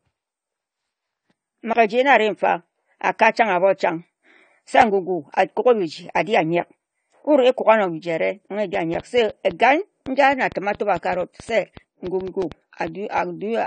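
Throughout, the speech is dull with nothing above 9 kHz and has plainly audible smearing and a warbling texture, which points to AAC compression, likely AAC-LC at around 32 kbps, where bits run short and the codec drops the top band and thins the rest.

A block of digital silence at 1.73 s, about 20 ms long, cuts the audio out and back abruptly as a brief hole. A 5 ms one at 4.81 s is heard as a tick.

From 8.75 s to 13.19 s a train of clicks, about 20 of them at an irregular 4.7 per second and around 5 dB above the speech, ticks over the audio, likely from interference, a faulty connection or a power supply. Within it, digital silence blocks of 10 ms at 8.94 s and 5 ms at 12.42 s add further ticks.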